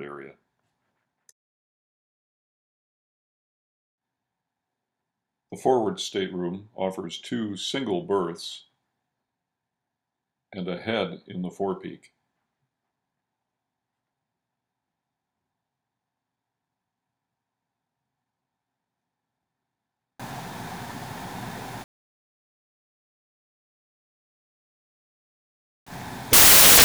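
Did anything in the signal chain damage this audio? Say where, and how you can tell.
Yes. From 20.20 s to the end, the samples are built from the wrong bytes, a sample-format conversion fault. The reader has misassembled each sample's bytes, through an offset, swapped byte order or wrong alignment, so the rapidly varying low bits now dominate every value. It sounds like a sudden wall of loud, harsh broadband noise, close to white on the louder material. On a spectrogram that section fills evenly across all frequencies, and the waveform jumps to dense, high-level hash.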